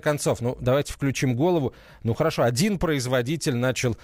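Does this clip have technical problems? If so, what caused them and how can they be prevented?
Yes. A gritty, inharmonic fizz rides on the speech for the whole clip, strongest on loud and bright sounds, sitting roughly 25 dB below the voice. This is crude rate conversion: samples were repeated rather than filtered, a 3:2 step that fits a conversion from 32 kHz to 48 kHz. Duplicating every other sample leaves a regular error pattern that produces shifted, inharmonic copies of the speech. Using a proper band-limited resampler with anti-imaging filtering prevents it.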